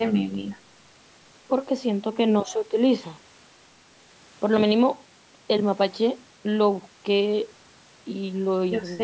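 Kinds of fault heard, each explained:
No faults can be heard in this speech recording. It has passed through a call's microphone processing, which removes the lowest bass and leaves nothing above 8 kHz, as that path normally does.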